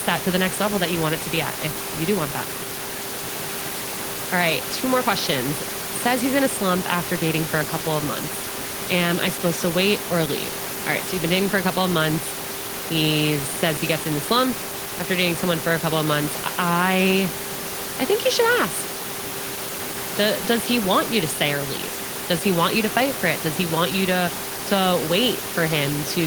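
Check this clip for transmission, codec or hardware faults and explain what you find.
No transmission, codec or hardware faults turn up in this speech clip. Room noise sits about 10 dB below the speech throughout, and it belongs to the recording space rather than to any problem in the system.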